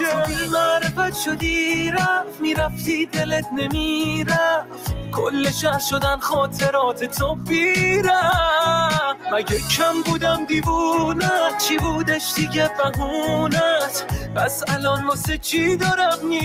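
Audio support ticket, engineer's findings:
Noise suppressor applied to music or sounds, throughout: speech-tuned suppressor reads steady content and ambience as noise, level pumping by around 5 dB as sustains and tails get pulled down.

Sound cut by the noise suppressor, 2.24–2.42 s, 2.69–2.89 s, 4.62–5.15 s, 7.35–7.5 s, 14.19–14.37 s: suppressor classed these passages as noise, sinking sustains and clipping decays, down about 10 dB at 2.24 and 4.62 s, about 5 dB elsewhere.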